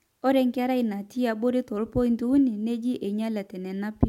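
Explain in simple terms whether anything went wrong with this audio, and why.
Nothing went wrong with this speech recording: the signal stays steady and intact the whole way, with no dropouts, jumps or added noise at any point.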